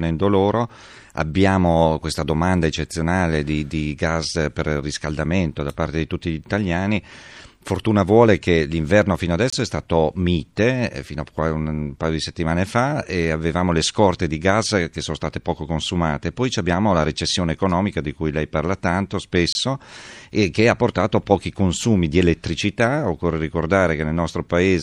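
Speech clip with a gap between chunks, twice: a 25 ms hole from 9.50 to 9.53 s, right after "vuole che l'inverno fino" and before "è stato mite eh", and another from 19.53 to 19.55 s just after "cui lei parla tanto". They're spaced 10 s apart, so the audio was handled in 10-second chunks with a sliver of silence at each join. Nothing's missing, but the flow gets chopped at those two points.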